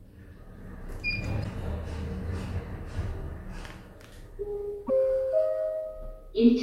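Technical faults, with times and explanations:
1.40–1.46 s and 4.85–4.90 s: damaged data in a compressed stream. Each event lasts about 56 ms and is heard as a short glitch in the sound. Some of the encoded bytes there are wrong. The decoder reads them as nonsense audio or drops those frames. It then loses its place and hunts for the next valid frame header.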